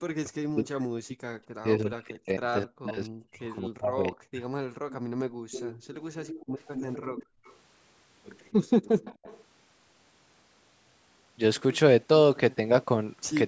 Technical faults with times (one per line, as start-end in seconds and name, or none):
0.02-1.12 speech suppressed in double talk
1.62-4.42 speech suppressed in double talk
4.70-5.51 background gated by the echo canceller
4.89-4.97 echo leak
5.51-7.56 echo leak
7.26-7.44 background gated by the echo canceller
9.05-9.43 echo leak